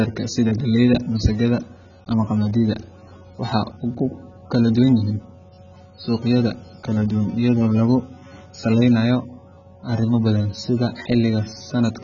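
From start to finish the speech sounds dull and smeared. Nothing is heard above about 7.1 kHz. Sibilants turn fizzy and watery, and sustained sounds warble. The damage is heavy and never lets up. This points to AAC compression, likely AAC-LC at a very low bitrate, around 16 kbps. With so few bits, the encoder lowers its cut-off and quantises the remaining spectrum coarsely. It leaves gaps or fills bands with substitute noise, which causes the swirling texture.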